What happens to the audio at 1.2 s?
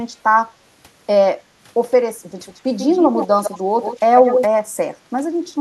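Nothing goes wrong at 1.2 s; the speech there carries on cleanly, with no dropout, click, glitch or other audible fault at that moment.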